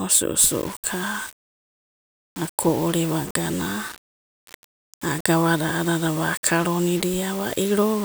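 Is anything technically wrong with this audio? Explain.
Yes. From 0.39 s to the end, the speech has grainy, signal-following distortion, likely low bit depth without dither, consistent with rounding to about 6 bits. With the error only around 20 dB below the speech, quiet syllables turn gritty and fade into sputter. The waveform shows stair-stepped levels; the spectrogram shows broadband grit that tracks the speech and vanishes in pauses.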